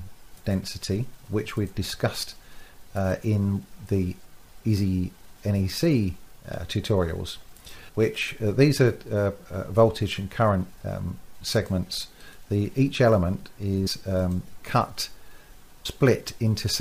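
Compressed frames skipped at 13.86 s and 15.85 s: the audio jumps ahead by roughly 70 ms, then 200 ms, whole frames of about 26 ms lost.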